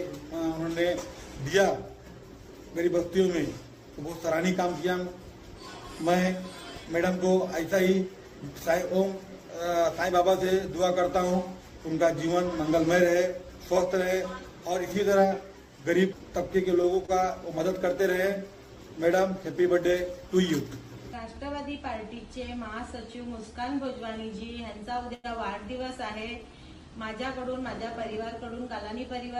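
Short stalls from a late packet occur at 16.81–16.86 s, 17.06–17.10 s and 25.14–25.26 s. Each time a packet missed its playout moment, the jitter buffer ran dry, and the receiver held the last sound until the packet arrived and resumed from the same point. Nothing is lost, but the sound hangs for 23 ms, 26 ms and 95 ms respectively. The last stall is the longest, a stretched hold.

A jitter buffer speed-up runs from 28.18 to 28.70 s. The buffer had built up more delay than it targets, so the receiver trimmed it by repeatedly cutting out short pitch-period-sized slices, removing about 40 ms in total. The sound plays at 106% speed without any change in pitch and comes across as briefly hurried.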